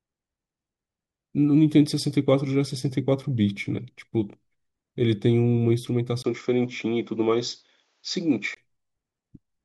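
Speech recording where from 6.22 s to 8.57 s, after a 20 ms gap, the sound narrows to nothing above 7.6 kHz with faint new noise, likely an input switched to a poorer device.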